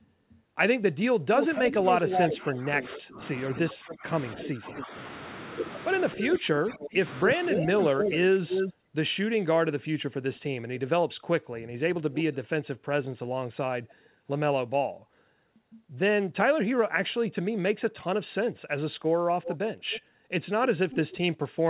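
From 1.34 to 4.84 s a delayed copy of the speech trails the original by about 271 ms, only a little quieter than the direct sound. This is an echo leak, likely from a far end on a loudspeaker whose echo canceller let its microphone pickup return down the line. Overlapping it, from 1.49 to 4.94 s, the main talker dips by up to roughly 15 dB in pieces adding up to about 2 s. That is speech suppressed in double talk, likely because the canceller could not tell the talker from the echo and turned both down.

The pattern repeats from 6.12 to 8.74 s, where the echo arrives about 275 ms late at roughly the same level as the speech itself. Within that stretch, from 6.16 to 8.44 s, the talker again drops by up to about 15 dB for around 1 s in total, likely for the same double-talk reason.

Shorter, fainter echo scraps follow. From 12.12 to 12.36 s one sits around 15 dB down at a 280 ms delay, likely a leak. 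From 13.88 to 13.93 s a trace, very far below the speech, arrives 282 ms late, likely from the same cause.

From 19.42 s to the end the echo is back at about 289 ms delay and around 10 dB below the speech, likely residual leakage from the loudspeaker side.

Throughout, nothing reaches above 4 kHz, which fits a narrowband G.711 call path.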